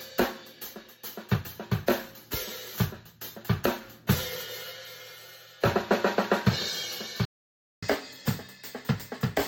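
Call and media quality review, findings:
Playback stall, 7.25 to 7.83 s: output cuts to full silence for 0.57 s mid-flow. Waveform flatlines; spectrogram shows a clean vertical blank band. Likely the player buffer ran dry or its output thread blocked, then resumed.

Catch-up at higher speed, 7.83 s to end: audio runs 1.15x fast, pitch up about two semitones, as the player resamples to drain its backlog. Spectrogram harmonics shift upward; waveform features compress in time.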